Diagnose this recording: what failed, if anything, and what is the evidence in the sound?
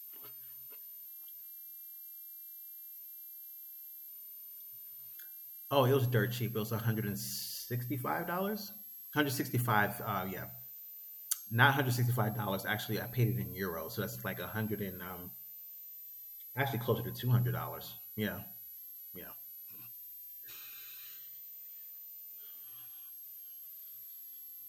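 Switching supply whistle in the analogue power stage: a high whine wandering between 11.9 and 13.1 kHz, roughly 15 dB below the speech throughout, drifting rather than steady like fixed-frequency interference.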